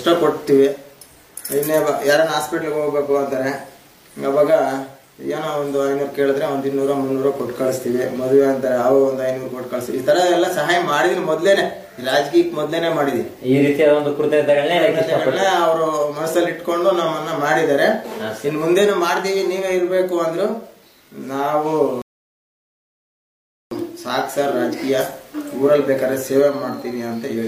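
At 22.02 s the audio drops into silence. It stays silent until 23.71 s, then picks up exactly where it left off. This is a rebuffering stall. The player used up the audio it had downloaded and had to wait for more to arrive before continuing. No sound is skipped or repeated. The gap simply inserts about 1.7 s of dead air, stretching the playback by that much.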